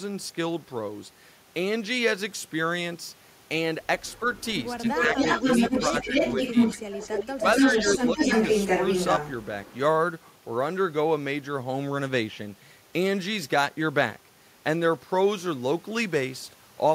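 Speech, with an echo leak running from 4.06 to 9.76 s: a second copy of the talker trails the original by about 271 ms and sits at roughly the same loudness. The likely cause is a far end playing the call over a loudspeaker whose echo canceller failed to subtract what its microphone recaptured, returning that residue down the line. Inside that window the loudspeaker side's voice also sags, which points to speech suppressed in double talk at 4.81–5.17, 5.90–6.15, 6.53–6.94, 7.29–7.45 and 7.98–8.17 s. Most of these are shallow dips of a few decibels, while the one at 7.29–7.45 s goes much deeper, around 20 dB. This is likely the canceller mistaking overlapping talk for echo and attenuating both together.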